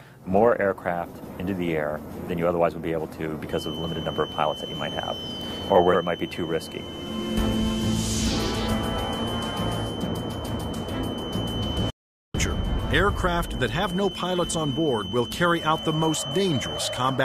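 From 3.45 s to the end of the clip a feedback whistle sits behind the sound: a thin, steady tone at 3 kHz, about 15 dB below the main signal, swelling and fading slowly in level. The likely cause is a loudspeaker-to-microphone loop running right at its feedback threshold, so a single frequency keeps ringing without building into a howl. Because it starts early and never clears, it persists under everything that follows.

At 11.90 s a playback stall cuts the output to silence for 440 ms, with sound returning at 12.35 s. The break lands in mid-flow. The likely cause is the player running short of data, or its playback thread being blocked, so nothing reached the output until it recovered. The 3 kHz whistle drops out along with everything else during the gap.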